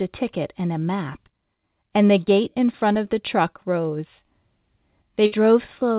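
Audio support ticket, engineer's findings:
Held last sound then fade at 5.26–5.34 s, about 60 ms of speech skipped on resume. Burst of packet loss; receiver concealment stretched the last sound. Narrowband call path, nothing above 4 kHz.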